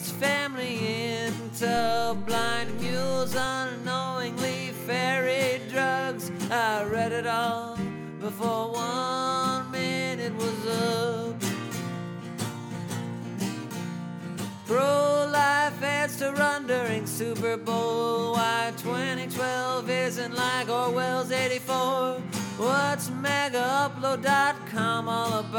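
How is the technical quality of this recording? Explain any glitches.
The recording has one glitch, a DC step. At 1.77 s the waveform's zero line jumps by about -31 dBFS, as if an offset input were switched in, and the fault ends at 3.46 s. The step gives a low thump or click, seen as a shifted baseline and brief low-frequency smear on a spectrogram.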